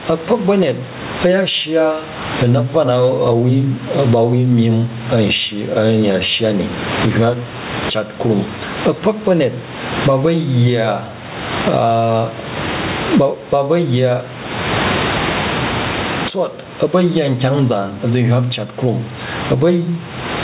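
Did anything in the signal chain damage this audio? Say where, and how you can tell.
Yes, there's gain pumping throughout the speech. The gain swings by around 25 dB, bringing loud and soft parts closer in level and leaving everything squashed. At the capture stage, input gain was likely set far too high, with a fast limiter clamping down.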